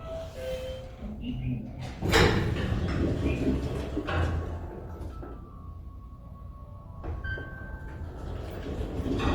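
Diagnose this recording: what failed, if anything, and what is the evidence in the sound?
The codec stage failed: grainy, rough texture runs through the whole clip, most likely from Opus compression in its music mode at a rate that fits about 24 kbps. Content extends to 20.1 kHz, but thin bands are filled with folded or noise energy, so tones turn gritty rather than swirling as MP3 would.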